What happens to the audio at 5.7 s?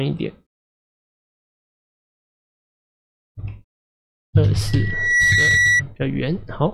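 Loudspeaker feedback squeal runs from 4.68 to 5.83 s: the microphone picks up its own loudspeaker, and at 1.9 kHz the loop gain exceeds one, so a single tone swells over about half a second into a squeal roughly 5 dB above the sound.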